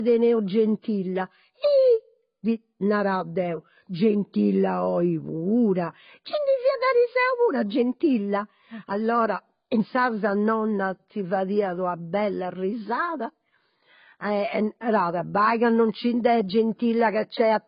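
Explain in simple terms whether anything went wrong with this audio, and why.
Yes, the whole recording sounds dull and smeared, with nothing above about 5.1 kHz and a warbly, fizzy edge on the speech. That texture, not just muffling, points to heavy AAC compression, likely squeezed too hard to save space.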